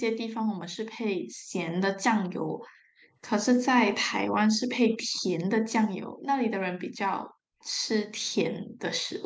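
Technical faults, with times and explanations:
4.93–4.97 s and 7.60–7.73 s, echo leak: a far-end echo canceller likely missed some loudspeaker pickup, so faint scraps of speech return 316 ms late, about 35–40 dB down.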